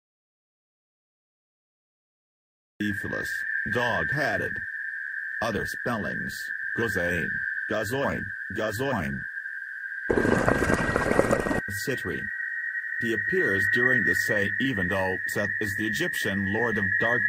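From the very first instant until 2.80 s the clip sits in an audio dropout to silence, already under way when the recording begins. The input was likely lost through a disconnected device or a stray mute while the recorder kept writing silence, so there is no room tone at all. At 2.80 s sound arrives abruptly. On a waveform the opening is a flat line; a spectrogram shows solid black before a hard vertical edge.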